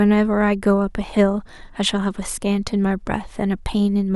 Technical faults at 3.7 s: none

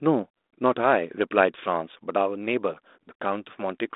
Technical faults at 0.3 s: none

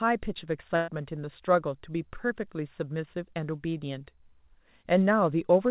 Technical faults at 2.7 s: none

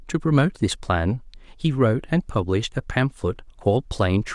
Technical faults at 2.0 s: none

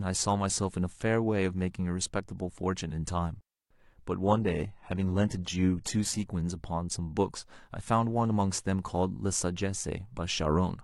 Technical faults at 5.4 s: adaptive stream at a lower bitrate

